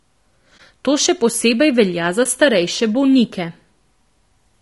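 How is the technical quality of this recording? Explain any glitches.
The recording has plainly audible coding damage throughout, plus two short gaps. The speech sounds rough and grainy, with noise filling the spaces between harmonics and a thin, synthetic-sounding top band. This is likely low-delay AAC compression (AAC-ELD) at a bitrate around 32 kbps. Its short frames resolve pitch harmonics poorly, and at this low bitrate the bits run out. This differs from ordinary low-bitrate MP3 smearing, because the graininess sits inside the voice rather than as pre-echo.

AAC frame loss with muting occurs at 0.57 to 0.60 s and again at 2.23 to 2.26 s, between "še posebej velja" and "starejše bolnike". Each hole lasts about 20 ms, which fits a single lost frame whose spectrum was zeroed. The overlapping windows fade the sound out and back in, so the gap has soft edges, unlike a hard dropout.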